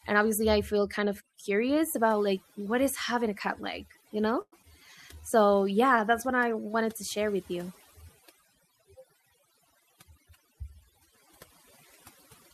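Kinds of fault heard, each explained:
Overdone noise removal: Throughout, heavy noise reduction mutes frequency bands it mistakes for noise. The background drops and breaks up into twinkling specks. Unlike packet problems, it is constant, not tied to moments.
Call audio freeze: Just after "cat like you know", from 4.41 to 4.54 s, the last sound is stretched for about 0.11 s, fading to roughly 50 ms of silence. The speech then resumes where it stopped, with nothing lost. This is likely delayed packets draining the jitter buffer.
Short concealed packet loss: At 4.62 to 4.65 s, also just after "cat like you know", about 20 ms of speech never arrives and a brief synthesized fill patches the hole. It is heard as a quick smear or wobble. Unlike the freeze, real audio is missing here rather than delayed.
Jitter buffer speed-up: From 9.58 to 10.71 s, the receiver trims tiny pitch-period slices to shrink a backlog, removing roughly a tenth of a second. 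The speech runs about 10 percent faster at unchanged pitch and sounds hurried. There is no gap or smear, only compressed timing.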